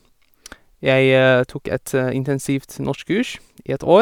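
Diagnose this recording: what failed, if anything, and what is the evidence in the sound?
Nothing failed here: listening through the speech, there's no sign of trouble at any stage of the chain, so there's nothing to diagnose.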